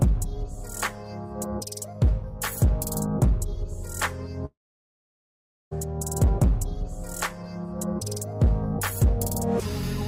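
The stream likely suffered a long network dropout from 4.45 s to 5.73 s, when no audio arrived. The receiver stretches the last sound into a brief fading buzz, leaves about 1.17 s of silence, and the audio resumes with 1.26 s missing.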